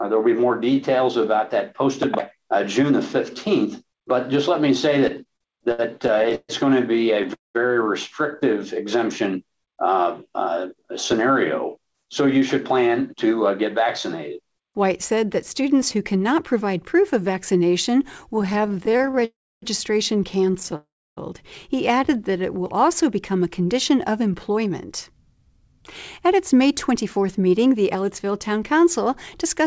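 The audio has passed through a call path band-limited to 8 kHz, consistent with G.722 at 64 kbps, so the spectrogram is empty above that line throughout. Repeated stalls (stutter) occur from 5.08 to 7.26 s and again from 18.36 to 20.74 s. Packets arrived late or too slowly, and the receiver kept stretching the last sound to cover the gaps. The first run has 14 gaps totalling 337 ms, the longest 136 ms, making up about 15% of that span. The second has 29 much shorter gaps, none over 23 ms, totalling 306 ms. Nothing is lost, but the sound drags and judders. On a spectrogram the concealed stretches appear as smeared horizontal bands where the previous spectrum is held, and the waveform shows repeated, slightly decaying copies of the same cycle. Three call audio freezes follow, at 7.34 to 7.57 s (211 ms), 19.25 to 19.64 s (373 ms) and 20.76 to 21.19 s (408 ms). In each, the sound continues briefly as a fading buzz and then drops to near-silence for roughly 170 ms in the first case and 290 ms in the other two, after which the audio resumes where it stopped. 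The likely cause is a held-up packet stream that emptied the jitter buffer, which pushed the playout delay back by the same amounts. These freezes read as a tapering tail followed by a flat, blank stretch on the waveform. A jitter buffer speed-up runs from 10.47 to 13.83 s at about 105% and again from 24.50 to 29.60 s at about 104%, each trimming roughly a fifth of a second by dropping pieces of one or a few pitch periods. The pitch stays the same while the pace is quicker, and the waveform shows periodic cycles spliced out with no visible gap. Between 21.75 and 23.04 s a jitter buffer slow-down does the reverse, repeating pitch periods to add 69 ms at about 95% speed to rebuild the buffer reserve. This makes sounds drawn out, and the spectrogram shows slightly lengthened harmonic segments.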